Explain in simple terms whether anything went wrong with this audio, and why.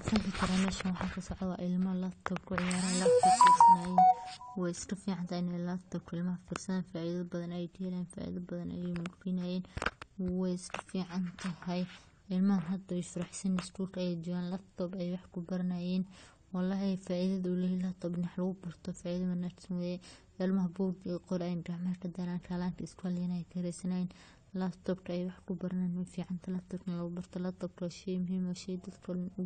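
AAC compression damage runs through the whole recording: the speech sounds dull and smeared, with nothing above about 9 kHz and a fizzy, warbling edge on hissy sounds. The likely cause is heavy data-saving compression, which discards fine detail it judges least noticeable.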